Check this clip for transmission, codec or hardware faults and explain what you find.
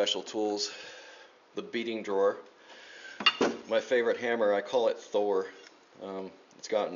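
No transmission, codec or hardware faults.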